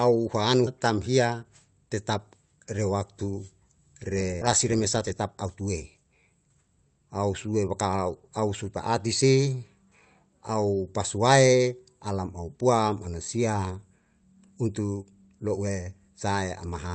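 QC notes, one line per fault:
4.41–4.43 s, skip ahead: around 0.4 s of speech is missing, and both sides join with no fill, unlike a dropout, which leaves silence.
4.65–5.98 s, jitter buffer speed-up: the speech runs 10% fast at an unchanged pitch as short pitch-period pieces are trimmed, unlike resampling, which raises pitch.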